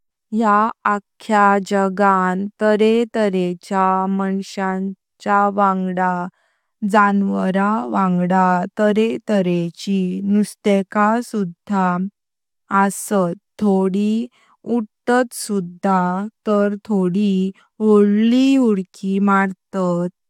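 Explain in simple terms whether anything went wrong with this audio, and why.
Nothing went wrong with this recording: the speech signal stays steady and intact throughout, with no technical problem to point to at any moment.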